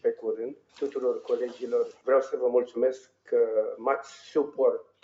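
From start to finish, a speech-tuned noise suppressor left on for music or sounds pulls level in and out by a few decibels, so held material thins and flutters while attacks survive. Unlike compressor pumping, the dips follow steadiness, not loudness.

Sound cut by the noise suppressor occurs from 0.54 to 0.78 s, dropping by up to about 12 dB, and from 3.0 to 3.3 s, by up to about 11 dB. Sustained sound and tails sink while onsets stay intact, which distinguishes these dips from codec dropouts.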